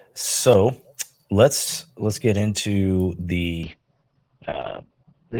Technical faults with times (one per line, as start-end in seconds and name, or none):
3.65-5.40 call bitrate drop